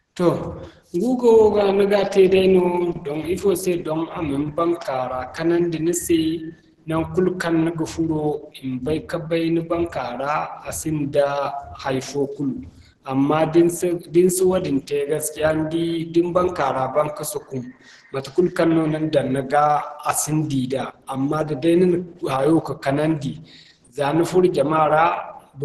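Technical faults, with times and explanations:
Throughout, Opus compression: the speech is heavily muffled and hoarse, with nothing above 12.1 kHz, which fits a likely hybrid-mode encode around 12 kbps.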